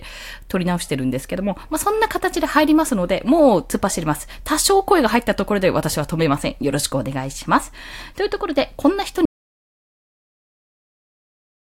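A speech clip with an audio dropout to silence from 9.25 s to the end. The sound cuts off mid-flow into silence with no room tone, most likely from a lost input or a stray mute. The waveform shows a dead flat line and the spectrogram goes completely blank.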